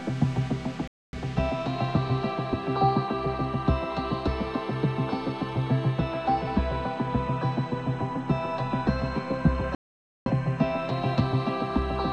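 The receiver twice lost valid digital frames and muted until good ones returned, a digital broadcast dropout. Sound cuts to silence from 0.88 to 1.19 s, then from 9.75 to 10.31 s. That second, roughly twice-longer hole swallows whatever was sent meanwhile.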